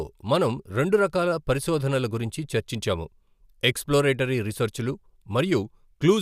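No technical faults can be heard anywhere in the speech recording, and the signal holds steady throughout with nothing dropping out, breaking up or shifting.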